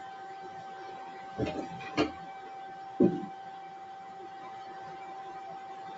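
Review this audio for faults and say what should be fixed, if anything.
Noise suppressor applied to music or sounds, throughout: sustained tones and tails are read as noise and pulled down by about 5 dB, so the sound pumps and thins. To prevent it, switch off speech noise suppression, or use a music mode, when sending non-speech audio through the call.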